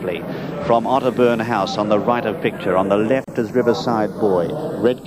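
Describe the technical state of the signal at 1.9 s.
At 1.9 s the channels are drifting apart, as they do across the whole clip. Clocks differing by around 70 ppm make the interchannel delay creep toward roughly 0.3 ms, so mono comb notches sweep slowly, heard as slow flanging that drifts one way rather than oscillating like a flanger effect.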